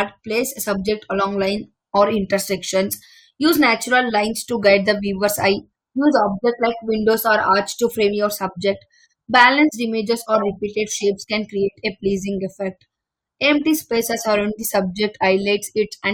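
A speech clip with a brief crackle at 9.36 to 9.48 s, right after "to frame your subject" and before "images or repeated shapes". This is hard clipping: the signal overdrove a stage by about 3 dB, so the peaks were cut flat, adding high harmonics.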